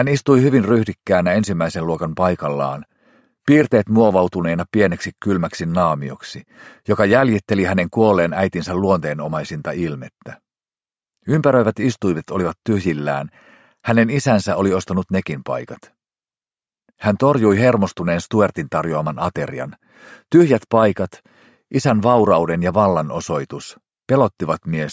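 No dropouts, distortion, level jumps or timing errors turn up anywhere in the recording, so there is nothing to flag.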